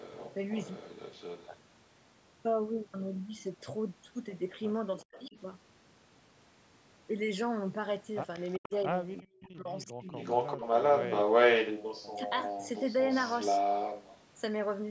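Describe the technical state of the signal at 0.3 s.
At 0.3 s there is echo leak (0.0–1.5 s): a faint copy of the speech trails about 0.39 s behind, likely from a loudspeaker echo canceller missing some pickup, appearing as ghosted, fainter repeated harmonic patterns on a spectrogram.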